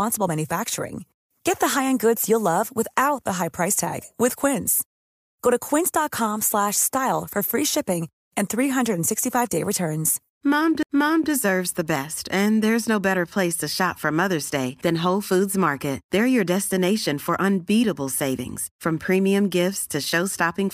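At 10.83 s the speech is broken by a small tick and a momentary dropout, roughly 15 ms of silence, after which it carries on from a different point rather than where it left off. This is a CD skip: a knock or a flaw on the disc threw the laser onto another turn of its spiral track, so the player muted briefly and resumed from the new position, jumping the audio by whole rotations of the disc.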